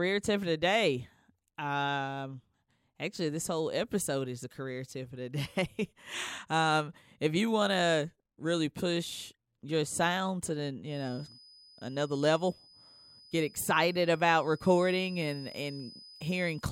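A speech recording in which a feedback whistle enters at 10.84 s and continues to the end at 16.72 s: a thin, steady 5 kHz tone, swelling and fading slowly in level, roughly 25 dB below the speech. Likely cause: a loudspeaker-to-microphone loop held just at the onset of feedback.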